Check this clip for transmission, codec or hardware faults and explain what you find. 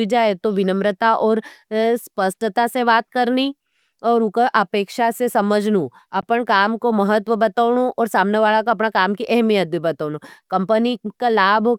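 There is one fault, a brief gap in the speech. From 6.21 to 6.23 s, just after "उका अपेक्षा से समझनू", the audio cuts to silence, then resumes as if it had kept playing. This is likely a Bluetooth dropout: about 14.5 ms of audio never reached the headphones in time, which fits a single lost packet.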